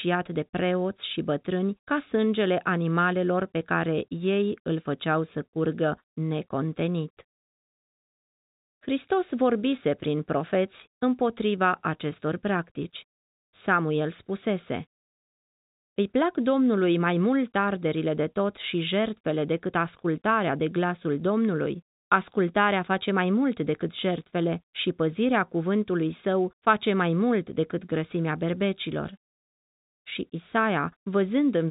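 Nothing goes wrong anywhere in this telephone-band speech.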